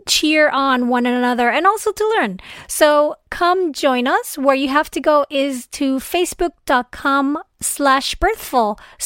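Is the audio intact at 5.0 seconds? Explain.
Yes, the speech at 5.0 seconds is intact, with no dropout, glitch or other fault at that moment.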